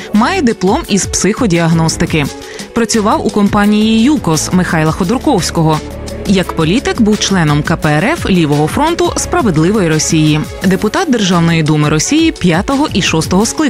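At 7.77 s a mains buzz starts and runs to the end. Switching spikes from a 60 Hz supply leak in twice per cycle, adding harmonics up into the kilohertz range. It sits about 35 dB below the sound, a steady, raspy buzz.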